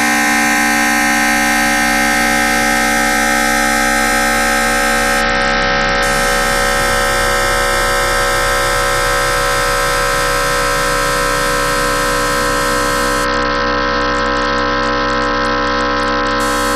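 Bluetooth SBC bit pool drop at 5.21–6.03 s and 13.24–16.40 s in this everyday-sound recording: treble dulls and gritty noise rises, consistent with the bit pool falling from 31 to about 7 on a congested link.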